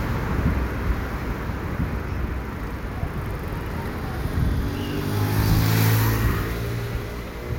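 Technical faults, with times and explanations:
0.0–4.0 s doubled audio track: a dry copy about 5 dB quieter lags roughly 1.5 s, likely from a slower second capture; the spectrogram shows shifted repeats ending abruptly at 4.0 s.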